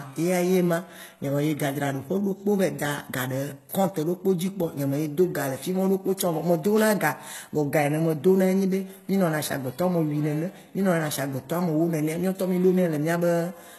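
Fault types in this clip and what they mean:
HE-AAC compression: The encoder likely coded only the lower part of the spectrum and rebuilt the treble by copying lower bands upward under a coarse envelope, at a rate that points to a very low bitrate around 16 kbps. Throughout this speech the codec damage is plainly audible. Nothing reaches above 12.3 kHz, and the synthesised upper band has harmonics that fail to line up with those below, so s sounds come out gritty, metallic or lispy.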